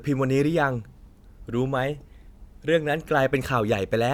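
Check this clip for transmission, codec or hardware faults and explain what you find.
No transmission, codec or hardware faults turn up in this clip.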